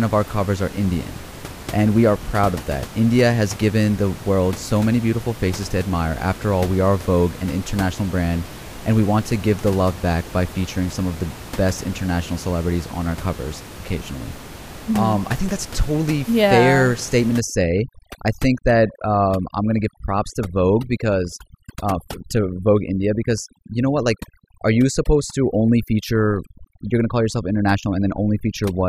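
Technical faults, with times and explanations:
17.40–28.88 s, overdone noise removal: an over-aggressive noise reducer shuts off bands near its noise estimate, leaving a lowered background with twinkling specks.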